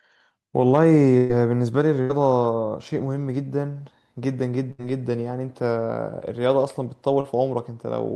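At 1.17 s there is a burst of packet loss lasting about 0.14 s. Roughly 120 ms of audio never arrived. The receiver kept the last sound going and let it fade, so a held, dimming continuation of that sound covers the hole. When the audio returns, that stretch is simply gone. The same thing happens at 2.01 to 2.11 s and at 4.71 to 4.80 s, each time with about 80 ms missing.

At 7.20 s comes a short concealed packet loss. About 40 ms failed to reach the decoder in time. The receiver patched the gap by extending the preceding sound, then blended back into the real signal. What you hear is a brief smear lasting well under a tenth of a second.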